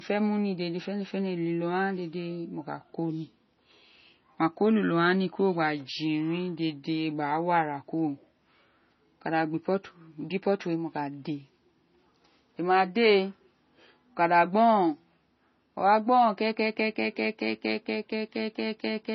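Throughout, the speech stops dead above 6 kHz and sounds smeared; that's likely low-bitrate MP3 audio saved at a high bitrate, so the big file just keeps the old damage.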